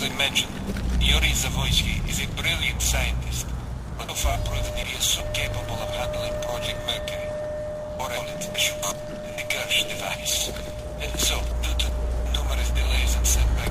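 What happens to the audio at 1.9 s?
Nothing goes wrong at 1.9 s; the audio plays through that moment intact, with no dropout, click, glitch or other technical fault.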